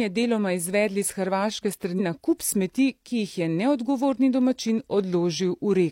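Speech, with one fault from damaged data in a compressed stream. At 1.95 to 2.00 s, just before "na kup smeti ki", a brief glitch cuts in. Corrupted bytes made the decoder misread frames and lose sync. It then skipped ahead to the next valid frame header.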